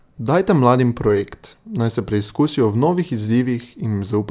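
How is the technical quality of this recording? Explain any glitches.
No glitches turn up anywhere in this recording, so there's nothing here that needs explaining.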